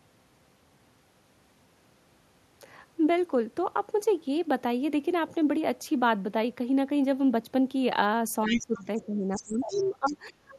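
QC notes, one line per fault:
8.46–8.6 s, 8.76–8.82 s, 9.32–9.9 s and 10.06–10.13 s, other side's voice leaking through: scraps of a second talker, about 10 to 25 dB below the speech, likely loudspeaker echo the canceller left behind.
8.48–10.55 s, speech suppressed in double talk: the talker's voice sinks, dropping by up to about 20 dB for roughly two seconds, likely the echo canceller attenuating everything while both sides spoke.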